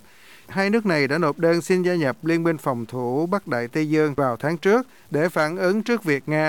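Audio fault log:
throughout, low bit depth without dither: grainy distortion tracks the speech, with the error roughly 35 dB below the signal. Quiet passages turn gritty and the softest tails sputter or fall silent. This likely comes from an 8-bit path truncated without dither.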